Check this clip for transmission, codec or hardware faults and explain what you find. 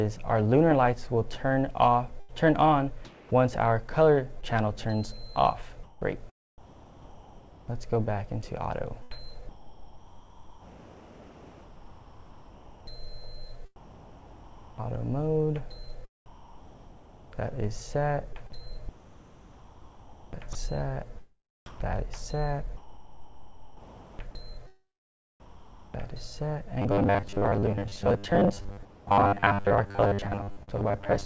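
Four kinds of transmission fault are audible, all in the call path itself. The codec layer, which fits G.722 at 64 kbps with nothing above 8 kHz, is not among them.

Sound chopped by the voice detector occurs from 2.20 to 9.14 s and again from 9.03 to 26.38 s. The sender's voice activity detector likely kept toggling transmission on and off, so quiet passages and the edges of louder sounds were dropped and replaced with synthetic comfort noise. About 1.6 s is lost in the first stretch and about 9.2 s in the second. The result sounds choppy.

Robotic sound from repeated short buffers runs from 26.82 s to the end at 31.25 s. Fresh audio likely arrived too rarely, so the playout side looped its last short chunk instead of waiting. The loop length imposes a fixed 100 Hz buzz, which points to roughly 10 ms buffers being repeated. About half of this stretch is repeated material. The sound turns metallic, loosely tracking the original contour.

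Comfort noise in place of the background appears from 28.85 to 29.07 s. Transmission likely paused during a gap, and the receiver generated noise shaped like the ambience instead of playing the real background, which sits about 24 dB below the loud parts. For those 220 ms the background becomes flat and featureless and drops by about 6 dB, then the real ambience returns.

Short concealed packet loss occurs at 30.63 to 30.69 s. About 40 ms of audio never reached the decoder, and concealment stretched the preceding sound over about 43 ms before crossfading back into real audio. It is heard as a brief smear or wobble, and any very short sound falling in that gap can disappear entirely.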